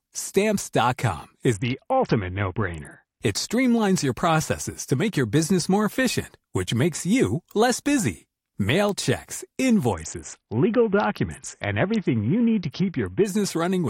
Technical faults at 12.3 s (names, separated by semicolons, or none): Bluetooth SBC bit pool drop